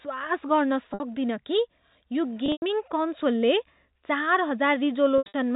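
At 0.94 s the speech has a 60 ms gap bridged by packet loss with pitch repetition. The receiver loops the last pitch period to fill the hole. It is brief, so it sounds like a slightly held, buzzy note. Around 2.46 to 2.62 s about 120 ms goes missing across 160 ms, the longest run 100 ms. The repeated period fades toward silence, then speech cross-fades back in. From 5.18 to 5.34 s, 140 ms is lost in bursts up to 80 ms, with the same buzz and fade. The audio is narrowband G.711 telephone coding, capped at 4 kHz.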